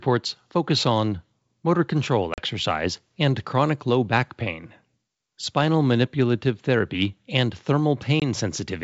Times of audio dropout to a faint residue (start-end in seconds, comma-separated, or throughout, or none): none